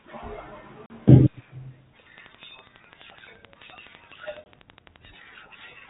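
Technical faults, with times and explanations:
0.86 to 0.91 s, packet loss on an ADPCM call: a 40 ms hard-edged silence, about two packets' worth, then the decoder's predictor and step size lag, so sound returns with brief distortion.
2.18 to 5.06 s, train of clicks: about forty similar ticks at a regular 11.9 per second, peaking slightly above the sound and audible in pauses, likely from nearby interference or a faulty connection or power supply.
4.44 s, packet loss on an ADPCM call: a single 20 ms dropout, roughly one packet, with brief distortion after. The rest of the band-limited audio points to 32 kbit/s G.726.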